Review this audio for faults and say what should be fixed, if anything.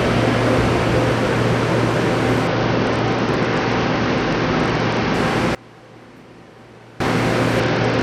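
Bluetooth SBC bit pool drop, 2.47–5.14 s and again from 7.60 s to the end: treble dulls and gritty noise rises, which fits the bit pool falling from 28 to 10, near 84 kbps. Prevent it by reducing radio congestion or keeping the devices closer together.

One channel inverted, 5.55–7.00 s: the sound collapses by about 24 dB into a faint residue, likely because one channel's reversed polarity cancels the shared content in the mono sum. Prevent it by checking channel polarity before any mono fold-down.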